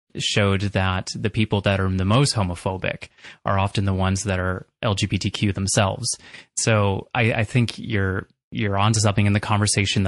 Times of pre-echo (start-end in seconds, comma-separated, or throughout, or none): 3.73-3.75